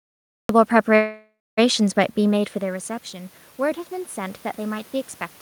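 The speech clip opens with about half a second of dead digital silence, then at 0.49 s the sound snaps in mid-utterance with no natural attack, as if a switch were thrown. This is a cut-off start: capture or streaming began late, so the first part of the sound was never recorded and the clip begins abruptly inside it. Shortly after, from 0.95 s to 1.59 s, the sound stalls. The last bit is stretched into a buzzy, fading tail, with roughly a quarter of a second of near-silence in it, before the speech carries on exactly where it left off. That is a call audio freeze, likely caused by packets held up in transit so that the receiver's jitter buffer ran dry. The receiver filled about 620 ms with concealment, and because playback resumed from the point where it stopped, nothing was lost but the speech now runs about 620 ms later than before. From 1.76 s to the end, the level swells gradually, and the room noise rises along with the voice, which points to automatic gain rising rather than the talker simply getting louder. 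Around 2 s the talker moves back from the microphone and the input drops by about 14 dB. The automatic gain control registers the quieter signal and slowly raises its gain over the following seconds, lifting speech and background together.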